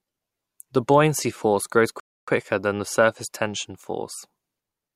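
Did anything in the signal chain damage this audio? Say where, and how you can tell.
Yes: a Bluetooth stall at 2.00 to 2.28 s, after "buoyancy force grows", leaves 277 ms of silence before "than the surface tension", likely the wireless link's buffer running dry.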